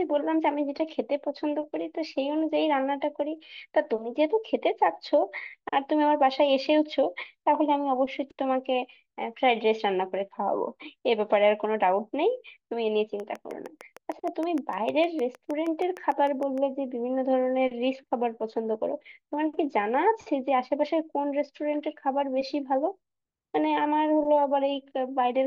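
From 13.20 to 16.59 s a train of clicks ticks over the speech, about twenty evenly spaced at 6.5 per second, roughly as loud as the signal, likely interference.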